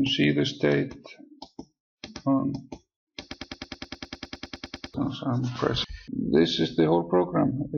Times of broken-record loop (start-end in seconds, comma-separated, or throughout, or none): 3.34-4.94